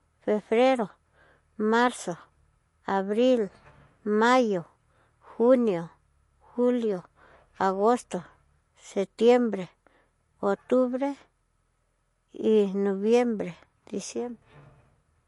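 From start to finish, the speech has a hard ceiling. Nothing sounds above about 11.3 kHz. S sounds turn watery and swirly, with a metallic chirp. The likely cause is MP3 compression at a low bitrate, fitting roughly 48 kbps.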